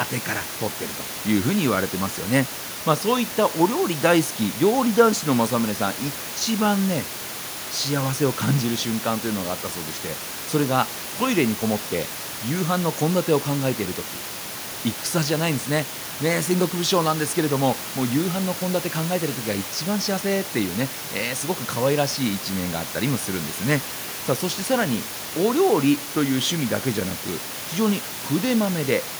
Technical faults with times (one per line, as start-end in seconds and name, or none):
none